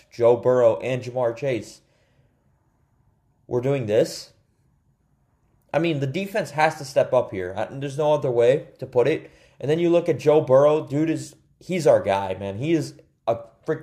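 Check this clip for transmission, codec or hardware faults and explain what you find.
Sample clock jitter is present throughout the clip. The converter's clock wanders by a fraction of a microsecond, so each sample is taken slightly early or late. That timing error costs more where the waveform changes fastest, leaving a faint hiss or roughness about 50 dB below the signal that swells on loud, bright passages and disappears in silence. On a spectrogram this appears as a diffuse high-frequency haze that tracks signal energy; the waveform looks unchanged.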